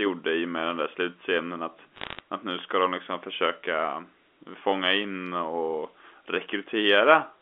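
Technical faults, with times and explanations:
1.96–2.20 s, bit errors on a digital phone line: there's a quick burst of sharp ticks and crackle just before "att nu ska de". On a 64 kbps A-law G.711 link each flipped bit corrupts one sample, and a hit on the sign or a high-order bit throws that sample far off, so you hear a click. The density sounds like roughly half a percent of bits going bad, while the narrow 250 Hz to 3.5 kHz phone-band speech underneath carries straight through.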